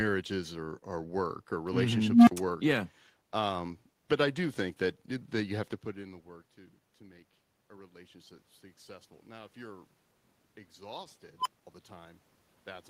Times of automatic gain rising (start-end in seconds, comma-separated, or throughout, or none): 5.97-8.51